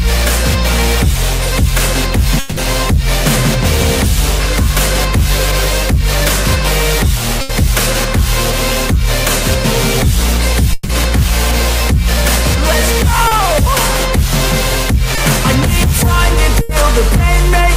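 At 2.39 to 2.59 s and again at 10.73 to 10.91 s, the sound freezes into a held, fading buzz or hiss for about 180 ms and 160 ms, then resumes further on with that stretch gone. A long network dropout is the likely cause. The spectrogram shows smeared, decaying partials with no silent gap, and the waveform tapers without reaching zero.

At 7.41 to 7.51 s and 16.61 to 16.71 s, a burst of packet loss removes 80 ms each time. The receiver extends the last sound and turns it down, so the waveform shrinks in amplitude and the spectrogram shows a frozen, fading band before the audio picks up past the lost part.

At 13.27 to 13.33 s (40 ms) and 15.15 to 15.19 s (20 ms), short concealed packet loss produces a brief smear or wobble where the decoder filled the hole by continuing the preceding sound. On a spectrogram this is a narrow blurred slice.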